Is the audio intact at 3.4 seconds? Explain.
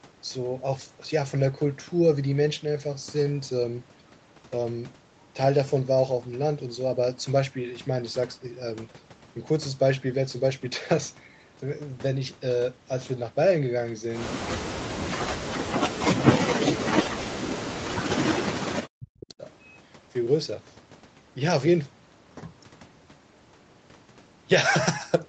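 Yes, the speech is intact at 3.4 seconds, with no dropout, glitch or other fault at that moment.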